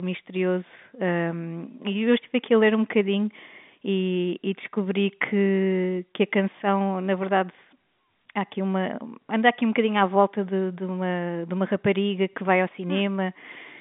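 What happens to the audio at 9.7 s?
Nothing goes wrong at 9.7 s; the speech carries on intact through that moment, heard through the narrow telephone band of its G.711 coding.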